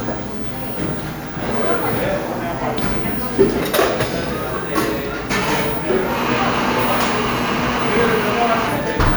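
Nothing technical goes wrong anywhere in these everyday sounds; there's no fault to point to at any moment.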